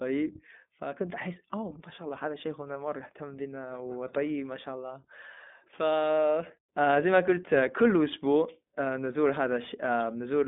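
Across the whole clip, iLBC codec damage: independently coded 20 ms frames sound rough and synthetic, and the spectrogram shows nothing above 3.7 kHz.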